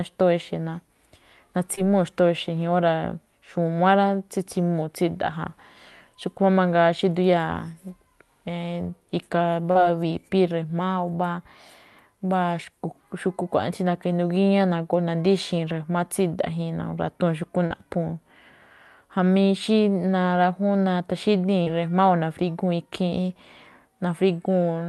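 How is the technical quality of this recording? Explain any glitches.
The speech has two kinds of glitch: four brief dropouts and one pitch-and-speed jump. The call codec's top end stops near 12 kHz.

Short concealed packet loss occurs at 1.75–1.79, 9.71–9.77, 17.66–17.72 and 21.62–21.68 s. Packets arrived too late, so the receiver extended earlier sound, leaving short smears or wobbles.

From 10.81 to 12.06 s, speech runs 5.4% fast and about 91 cents sharp. A drift correction step between clocks is the likely cause.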